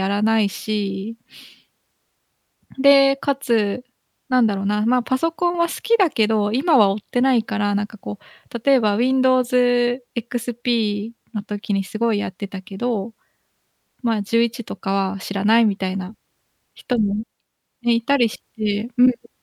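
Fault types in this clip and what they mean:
Nothing here to flag, as there's no technical fault to be heard anywhere in this speech recording.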